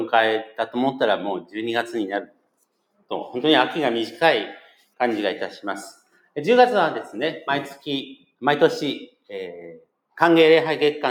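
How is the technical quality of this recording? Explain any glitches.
The recording is marred by a noise suppressor applied to music or sounds. It runs through the whole clip. A suppressor tuned for speech treats steady tones and ambience as noise. It keeps pulling them down, so the level swings by roughly 5 dB. The result pumps and flutters. Held parts thin out. Sudden onsets pass more freely than the sustained material around them.

There are five clear cases of sound cut by the noise suppressor: 0.45 to 0.75 s, 1.4 to 1.55 s, 2.22 to 2.54 s, 4.59 to 4.99 s and 5.93 to 6.36 s. The drops reach about 13, 14, 18, 16 and 17 dB. Each dip lasts a fraction of a second. Here the suppressor judged the sound to be noise and ducked it hard. The sound sinks in level or its decay is clipped short.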